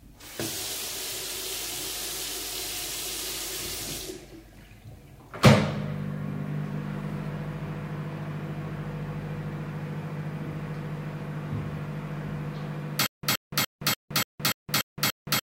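From 13.06 s to the end, a stutter with silent gaps: a 123 ms burst repeats eight times, each followed by 169 ms of digital silence, likely a stalled stream.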